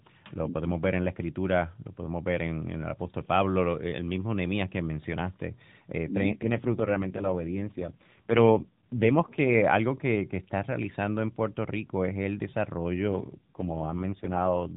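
The speech runs through a narrowband AMR codec, with nothing above 4 kHz. From 6.28 to 9.65 s, just before "algo que está realizando", comes an AMR rate drop. The voice turns rougher and more synthetic, with no gap and no band change. This fits a weak link forcing 12.2 down to 4.75 kbps. A second drop runs from 13.13 to 14.72 s.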